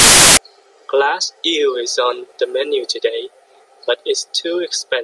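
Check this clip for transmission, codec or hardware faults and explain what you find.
One fault opens the clip. From 0.0 to 0.37 s there is file tags played as audio: an embedded cover picture, stored as compressed data, is read as if it were samples, producing a very loud burst of white noise with abrupt edges. Unlike a codec glitch or dropout, it sits at the file's start and is flat, broadband static rather than distorted speech.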